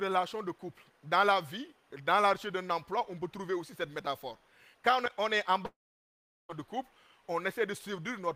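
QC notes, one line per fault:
throughout, timecode bleed: Linear timecode running at 24 frames per second is leaking in from a neighbouring track or cable, its square wave flipping between tones near 1 and 2 kHz. The result is a faint, steady chirping warble roughly 40 dB below the programme, sitting behind the sound.
5.65–6.52 s, long network dropout: A long run of audio likely never reached the receiver, which stretched the last sound into a brief fading buzz before leaving about 0.74 s of near silence. The sound then resumes further on, with about 0.84 s simply gone.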